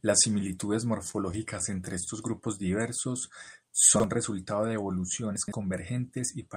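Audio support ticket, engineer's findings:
Repeated stalls (stutter), 1.11–2.03 s. Six short hitches, longest 23 ms, about 78 ms held in total (8% of span). Jitter buffer running dry on late packets; concealment extends last sound. Nothing dropped, delivery drags.

Chunks out of order, 3.96–4.04 s. Garbled moment. 40 ms chunk arrives or is written late and plays one chunk after its place. Three hard joins, no loss. Suspect playout/reorder stage.

Chunks out of order, 5.36–5.52 s. Longer jumble. 40 ms chunk displaced three chunks late, same mechanism. Three hard splices, content intact but misordered.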